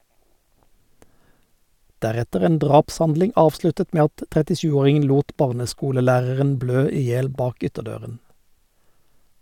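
No technical faults can be heard anywhere in this speech recording.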